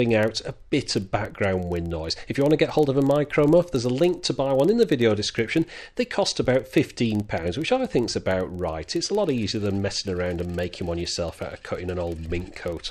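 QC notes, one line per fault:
throughout, filter restarted on every block: a steady low buzz of ticks at about 21.5 Hz tracks the level, as each block, likely 2048 samples, starts from silence.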